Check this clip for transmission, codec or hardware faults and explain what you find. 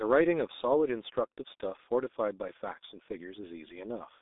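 The speech has passed through a heavily degraded low-rate codec, present for the whole clip. It has the signature of the G.723.1 codec throughout. That voice coder models speech in 30 ms frames at a very low rate, here one that fits about 6.3 kbit/s. It confines the line to roughly 250 Hz to 3.7 kHz, with nothing above 3.8 kHz. The result is muffled, hoarse speech with smeared consonants and thin low end.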